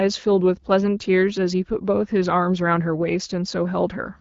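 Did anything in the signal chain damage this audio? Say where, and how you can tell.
No, nothing in the chain audibly damages this speech; the band stops at about 7.5 kHz, which fits a wideband AMR-WB voice path running at 12.65 kbit/s and holding up as intended.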